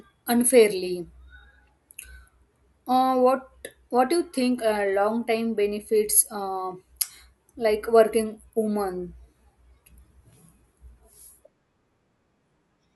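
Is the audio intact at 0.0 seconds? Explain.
Yes, the speech is intact at 0.0 seconds, with no dropout, glitch, or other fault at that moment.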